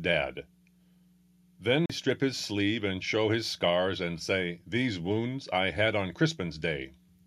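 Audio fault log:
1.86–1.90 s CD skip: A tick and a brief mute of about 40 ms, after which the audio resumes from a different point rather than where it left off. The laser has jumped to another turn of the disc's spiral, so playback picks up one or more rotations away. A plain dropout would leave a gap but keep the timeline continuous. Here the sound on either side of the mute does not join up, because the material has jumped.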